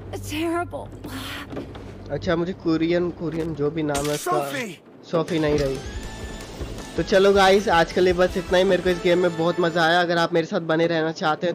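At 3.30 s a worn or dirty contact in the signal path shifts and briefly makes and breaks, producing loose connector crackle. For about 0.15 s, to 3.46 s, the audio is chopped into an irregular burst of scratchy crackle.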